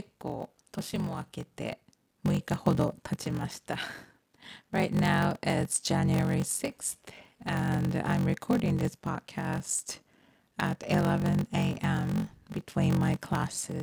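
A block size mismatch (padded) runs through the whole clip. A steady buzz near 46.9 Hz sits under the speech. Each block is written short and zero-filled, which fits 1024-sample reads. The speech plays slower, at 0.861 times speed, with pitch about normal.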